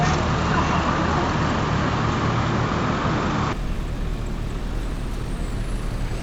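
From 0 to 3.53 s the audio is dull and boxy, with nothing above 7.5 kHz, a new noise floor about 30 dB down and a level about 5 dB off. At 3.53 s it clears with no gap, likely an input switched to a poorer device. The shifts in tone, level and noise together set it apart from a simple low-pass filter.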